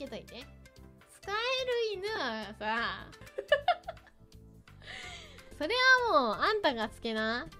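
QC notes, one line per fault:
2.16 to 2.18 s, lost LE Audio frames: a brief grainy smear replaces the sound for about 15 ms. The LC3 decoder, missing roughly two frames, refilled the gap by repeating the last spectrum with randomised signs, so tonal detail turns to noise.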